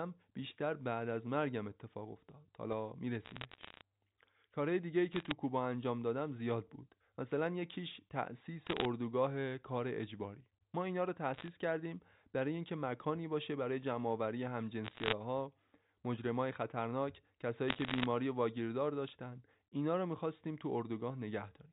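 Bit errors on a digital phone line break into this telephone-band speech in six bursts, at 3.24 to 3.81 s, 5.12 to 5.32 s, 8.67 to 8.85 s, 11.34 to 11.48 s, 14.84 to 15.13 s and 17.68 to 18.06 s. Each flipped bit corrupts a single G.711 sample. Where a high-order bit, or the sign of a loud sample, is hit, the sample jumps and produces a sharp tick. With an error rate of well under one percent, the ticks pile into crackle over unchanged speech, lighter in the first burst than in the later ones.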